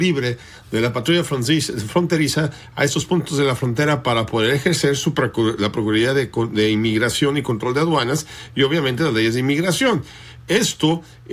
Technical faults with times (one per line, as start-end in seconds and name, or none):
none